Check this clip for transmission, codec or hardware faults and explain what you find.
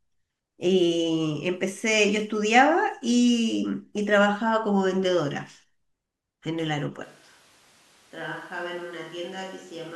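One hardware fault stands out, in the speech toward the end. From 7.05 s to the end, the close microphone's feed has likely dropped out and the recording has switched to a distant microphone. The voice turns suddenly roomy, hollow and thin in the bass, drops by roughly 10 dB, and room noise rises to around 20 dB below it.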